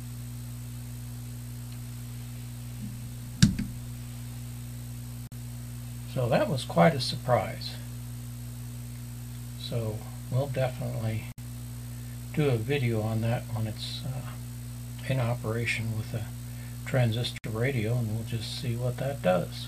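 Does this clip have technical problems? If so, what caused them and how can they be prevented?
Yes. Gaps at joins of encoded pieces open at 5.27 s (47 ms), 11.32 s (60 ms) and 17.38 s (60 ms), six seconds apart. Each piece's leftover encoder delay and padding shows as a thin vertical blank stripe on the spectrogram. Encode the audio in one pass, or trim each piece's encoder delay and padding before joining.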